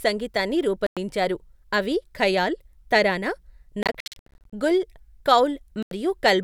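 At 0.87 s the speech cuts to silence for about 0.1 s. From 3.83 s to 4.53 s, after "అవి ఖయాల్ తరానా", short gaps scatter through the audio. At 5.83 s another 0.09 s hole opens. Each gap has abrupt or briefly faded edges, and speech resumes further along. A Bluetooth dropout is the likely cause.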